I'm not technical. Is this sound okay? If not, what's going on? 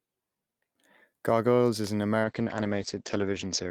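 No. At 2.25 s, just after "is an", there's a call bitrate drop: the connection seemed to weaken, so the call sent far less data for the voice. From there to the end, the speech turns muffled and rough, losing its crisp upper detail.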